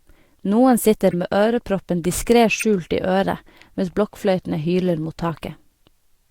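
Corrupt frames decoded: damaged bits in compressed frames were played as if valid, misplacing energy in frequency. Brief chirping bursts result at 1.10–1.14 s, before "med øreproppen diskret", at 2.57–2.63 s after it (loudest, near -5 dBFS), and at 5.29–5.31 s, one frame, near -20 dBFS.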